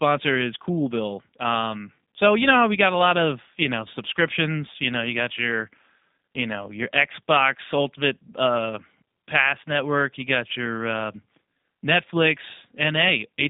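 From start to finish the speech carries G.729 codec damage: an 8 kbit/s model rebuilds it from a vocal tract filter and sparse pulses, confining it to 200 Hz to 3.7 kHz and leaving a plainly rough, synthetic texture.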